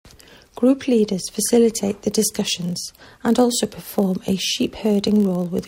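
From 2.34 s, right after "facilitate the", and continuing to the end, the speech carries a steady buzz at 46.9 Hz. This is a block size mismatch (padded): each block handed on is slightly short of what the next stage reads, and the shortfall is filled with silence. The rate fits a 1024-sample read. The inserted gaps are tiny, so playback slows only to 0.999 times normal speed. A waveform shows brief near-silent gaps about every 21 ms, and a spectrogram shows matching thin vertical stripes.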